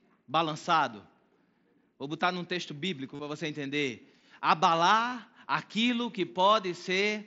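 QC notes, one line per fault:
3.15–3.19 s and 5.10–5.12 s, concealed Bluetooth headset packet loss. The first follows "botar num texto bíblico" and lasts 45 ms. The second, 22.5 ms, comes just before "aquilo que". The receiver fills each gap by repeating recent waveform, giving a brief buzzy hold and a slight warble on recovery. The lengths fit about six and three lost packets.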